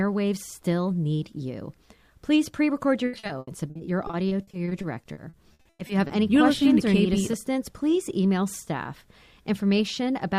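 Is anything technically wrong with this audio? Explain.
Yes. Repeated packet loss (robotic sound) runs from 3.05 to 6.11 s: around two dozen dropouts, each up to 100 ms, are patched by extending the preceding sound, concealing 840 ms, about 27% of the stretch, so the audio turns choppy, with pieces missing.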